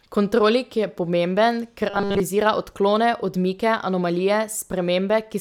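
From 1.90 to 2.20 s, right after "pomemben ker" and before "odklone odmike", the speech collapses into a rigid, metallic buzz pitched at 200 Hz that only loosely tracks the words. This is robotic sound from repeated short buffers. New audio was likely arriving too slowly, so playback kept looping the last chunk, a repeat every 5 ms. Nearly the whole stretch is looped material rather than real signal, and that constant repetition imposes the fixed buzz pitch.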